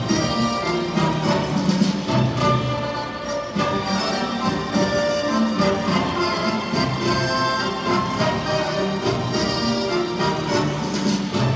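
At 1.5 s there is a single sharp tick: a bit error spike, where one flipped bit makes a single sample jump by a power of two and snap straight back. A second bit error spike follows at 9.15 s, this time spanning two consecutive samples. Both clicks are broadband and unrelated to the surrounding sound, cutting through the band-limited audio of the call path, which carries nothing above 8 kHz.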